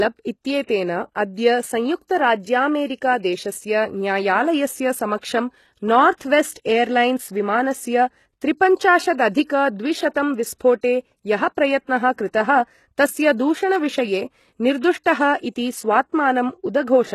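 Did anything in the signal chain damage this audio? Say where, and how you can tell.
Yes, at the codec stage, across the whole clip. The speech is plainly damaged by what is likely HE-AAC compression. Nothing sounds above about 12.3 kHz, and the treble that remains sounds synthesised rather than captured. Spectral band replication copies the lower bands upward under a coarse envelope, so the upper harmonics do not line up with the fundamentals, and s sounds come out gritty and lispy. The damage is consistent with a bitrate of around 16 kbps. A plain low-pass filter would remove the treble cleanly, but here it sounds present yet false.

There is also pre-echo, from the same transform codec, from 5.21 to 5.23 s. A short hiss precedes a sharp attack by about 20 ms, and the onset itself sounds softened and smeared. The codec spreads its quantisation noise across the whole block, so noise sized for the loud attack also fills the quiet moment before it. 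A click or dropout would sit at the attack or in place of it, but this hiss leads the attack.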